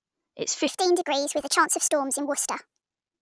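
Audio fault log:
0.68–2.82 s, wrong sample rate: from 0.68 s the sound suddenly jumps up in pitch and rushes along, about 1.38 times faster and roughly 5.5 semitones higher, until it drops back at 2.82 s. Speed and pitch moving together by the same ratio means the samples are being played out faster than they were captured, with no resampling. The ratio fits a 16 kHz recording played back at 22 kHz.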